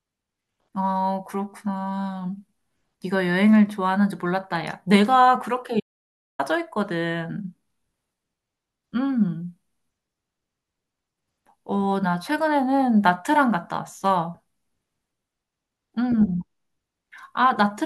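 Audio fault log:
5.80–6.39 s: audio dropout to silence. The speech cuts off abruptly and resumes after about 0.59 s. The gap is silent, with no room tone at all. The input was likely lost briefly while recording continued. Anything spoken there is gone.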